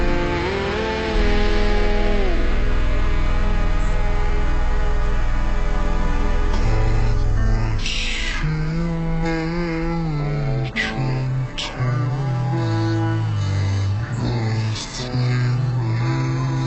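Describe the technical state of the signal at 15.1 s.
At 15.1 s the audio is affected by stereo read as mono, throughout: interleaved channels read as one, halving speed and dropping pitch an octave, with a faint mirrored image in the upper spectrum, unlike a simple rate mismatch.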